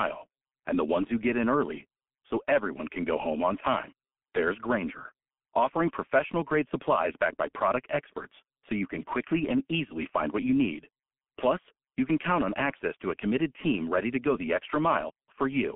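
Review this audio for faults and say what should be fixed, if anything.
Throughout the speech, the sound is muffled and hoarse, with consonants smeared and nothing audible above about 3.8 kHz. This is G.723.1 codec damage, and heavy: the codec keeps only a telephone band of roughly 200 Hz to 3.4 kHz and rebuilds the voice from a coarse model updated every 30 ms, which fits a bitrate near 6.3 kbit/s. To prevent it, record or transmit through a wideband codec at a higher bitrate instead of G.723.1.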